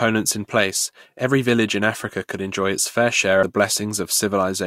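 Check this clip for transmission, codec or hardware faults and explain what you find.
There is one codec fault in this speech clip: compressed frames skipped at 3.42 s. About 150 ms of audio never reaches the output, which points to roughly ten consecutive frames that were either absent from the stream or rejected by the decoder as corrupt. Playback jumps forward by that whole-frame amount. It sounds like the speech abruptly moves ahead.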